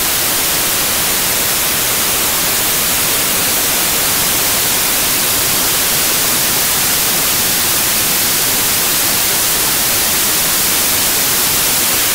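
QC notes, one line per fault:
Throughout: samples built from the wrong bytes. Each sample's bytes are joined in the wrong way, whether through an order swap, a one-byte offset or a wrong alignment. The result is that the rapidly fluctuating low-order bits are read as the most significant part of every value. The signal is buried under loud, harsh broadband noise, close to white on the loud passages.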